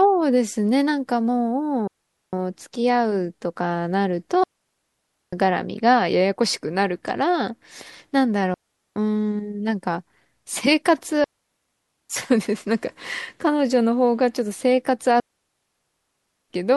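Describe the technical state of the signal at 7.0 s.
At 7.0 s the speech signal is intact, with no audible fault at that moment.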